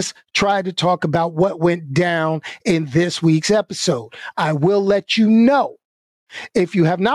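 Gain pumping runs right through the speech from start to finish. The level keeps getting yanked down each time a loud syllable hits, swinging by around 10 dB. Loud and quiet passages sit closer together than they should, so everything feels squashed. The likely cause is the input gain set far too hot, with a fast limiter or compressor clamping it back on each peak.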